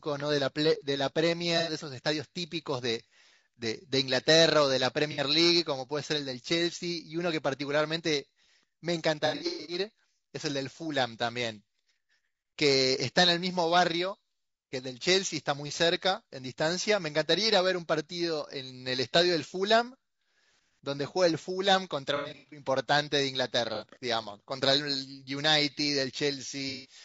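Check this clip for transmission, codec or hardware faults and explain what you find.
Two faults are audible: a constant codec degradation across the speech, and six short dropouts where lost audio has been filled in.

Low-delay AAC compression: throughout, the speech sounds rough and grainy, with noise between the harmonics and a thin, synthetic top band. The likely cause is AAC-ELD at a low rate, consistent with about 32 kbps. Its short frames resolve pitch harmonics poorly, and at a tight bit budget the encoder blurs harmonic detail and approximates the upper spectrum rather than coding it accurately.

AAC frame loss with concealment: dropouts occur at 1.58 to 1.72 s (90 ms of lost audio), 5.12 to 5.20 s (60 ms), 9.26 to 9.79 s, 22.16 to 22.64 s, 23.75 to 23.85 s (60 ms) and 26.69 to 26.95 s (150 ms). The decoder rebuilds each missing stretch from the last good spectrum, which produces a smeared, noisy or phasey patch. 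The 9.26 s and 22.16 s events are scattered losses of 300 ms and 270 ms spread across roughly 0.4 s, with the longest gaps near a tenth of a second.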